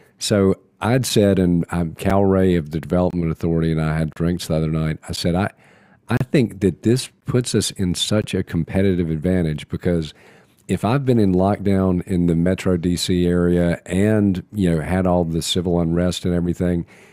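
Gaps between stream segments punch hard-edged silent holes into the speech about once a second, at 1.09, 2.10, 3.11–3.13, 4.13–4.16, 5.16, 6.17–6.21, 7.21 and 8.22 s, the longest one sitting between "I I" and "think that this puts". The segment timestamps don't quite meet, so the player pads the gap with silence, which fits one-second segments.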